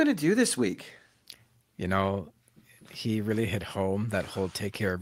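No dropouts, clicks, distortion or timing breaks turn up anywhere in the recording.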